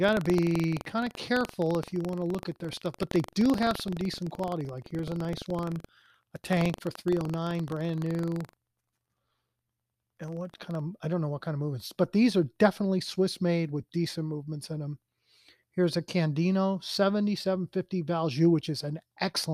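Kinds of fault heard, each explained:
Buffer tearing: the buffer's writer and reader have slipped and cross every period, splicing in a small slice of audio about a tenth of a second old. Until 10.82 s the speech rattles with a 23.4 Hz buzz, which fits a 2048-sample buffer. Unlike underruns, there are no silent gaps, and the buzz stops in pauses.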